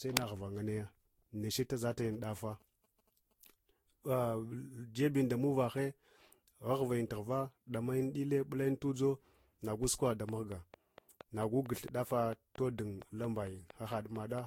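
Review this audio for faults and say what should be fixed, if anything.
Generation loss runs through the whole recording. The speech sounds swirly, hollow and smeared, and attacks blur. Nothing remains above 16.7 kHz. The texture fits roughly five lossy passes near 60 kbit/s, likely Vorbis, each requantising on a shifted frame grid. Keep a lossless master and encode once.

A train of clicks runs from 9.8 to 14.4 s. About twenty near-identical pops arrive at a steady 4.4 per second, peaking about 10 dB above the speech. They tick through pauses too. This is likely pulses from nearby equipment or a faulty connection or power supply. Check grounding, cabling and interface buffering.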